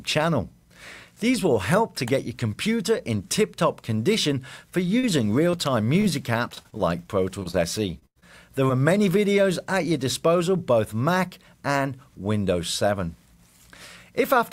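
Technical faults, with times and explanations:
4.99–8.71 s, repeated packet loss (robotic sound): about fifteen short holes, the longest 102 ms, are each patched by stretching the preceding sound. With fresh dropouts following closely, the patching turns the passage choppy with pieces missing, with roughly a tenth of the stretch synthesized.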